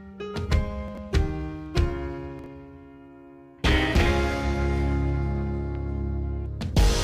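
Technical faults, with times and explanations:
0.88–0.98 s and 2.39–2.46 s, chunks out of order: a 23 ms block plays three, then two, blocks late, so there's a brief jumbled stutter at the hard joins.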